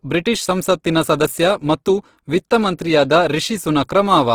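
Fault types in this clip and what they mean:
Opus compression: The speech is rough and grainy throughout, with noisy fizz standing in for clean detail, which is likely the work of the Opus codec in its music (CELT) mode at a low rate, something near 16 kbps. The bandwidth stays full, reaching about 20.3 kHz, so the sound is not muffled. Unlike MP3 damage, there is little watery swirl from bands dropping in and out, because empty bands are filled with noise instead.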